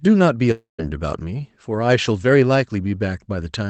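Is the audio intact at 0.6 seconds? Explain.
No. From 0.51 to 0.80 s the sound smears into a fading buzz, drops to silence for about 150 ms, then resumes with roughly 280 ms missing. This is likely a long network dropout, where the receiver stretched the last audio before giving up.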